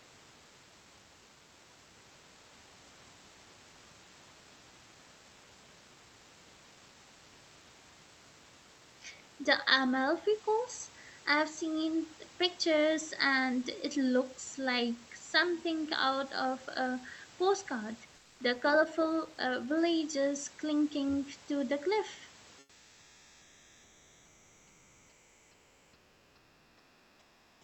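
Comfort noise in place of the background appears from 18.15 to 18.39 s, just after "out of a postcard", and again from 22.59 s to the end, after "clinging to the cliff". In both pauses the room's natural background drops away and a steady, featureless hiss takes over, about 4 dB quieter in the first gap and about 6 dB quieter in the second. The likely cause is Opus discontinuous transmission: the sender goes silent between phrases and the receiver synthesises noise to fill the gap.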